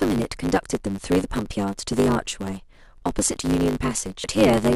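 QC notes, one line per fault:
Throughout: block size mismatch (truncated). Each block loses its tail, which fits 512-sample writes, leaving a 100 Hz buzz and speech running 1.16 times fast at near-normal pitch.
4.23 s: damaged data in a compressed stream. The decoder misreads corrupt frames, loses sync and hunts for the next header, giving a brief blip.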